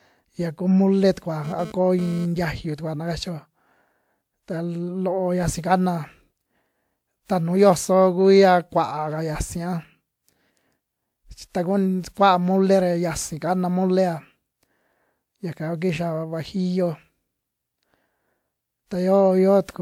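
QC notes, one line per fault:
Throughout: generation loss. The speech has a swirly, hollow, smeared character with softened consonant attacks, more than a 128 kbit/s WMA-type encoding alone would give. This is likely from re-encoding about four times, each pass re-quantising on a shifted frame grid. Content extends to about 20.1 kHz.
1.44–2.26 s: GSM phone buzz. A hard, raspy buzz at 217 Hz, rich in harmonics and about 16 dB below the speech, stops just before "tiayu tukua na kachio". Audio circuitry is rectifying a nearby handset's burst transmissions. The brief, intermittent burst fits a data transfer.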